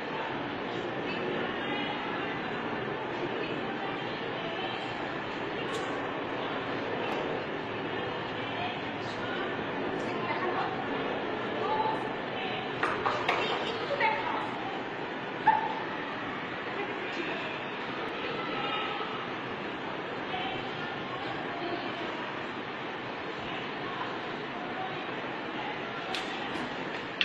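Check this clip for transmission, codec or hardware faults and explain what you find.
Two brief discontinuities stand out, at 7.12 s and 18.09 s. Each is a point where the sound jumps forward with no gap, as if a sliver of a few milliseconds had been cut out and the edges butted together. That points to a likely dropped buffer (overrun): the capture side fell behind, the hardware overwrote a block of samples before they were read, and the audio on either side of the loss was joined directly.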